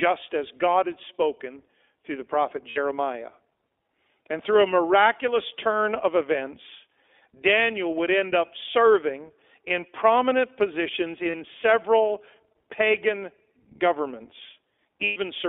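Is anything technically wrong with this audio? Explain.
Yes. The speech has passed through the iLBC codec for its whole length, and it has lost iLBC frames at three points.

iLBC codec, throughout: this narrowband voice codec codes each 20 ms frame's excitation on its own. Here it runs at 15.2 kbps, and the band is held to roughly 300 Hz to 3.5 kHz. The voice sounds thin, plainly rough and slightly synthetic.

Lost iLBC frames, at 2.70 to 2.78 s after "spoken through the prophet" (60 ms), at 11.30 to 11.35 s between "serving in prominent positions" and "several pagan" (40 ms), and at 15.04 to 15.18 s (120 ms): the decoder fills each gap by repeating the last pitch cycle with added noise, fading it over the longer loss. This is heard as a brief held, buzzy vowel. Because each frame stands alone, the voice recovers almost immediately.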